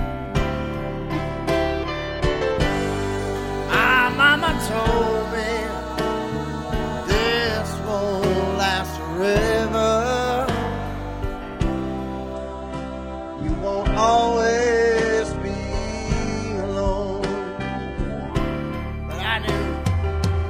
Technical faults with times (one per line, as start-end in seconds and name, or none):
12.34-18.34 adaptive stream at a lower bitrate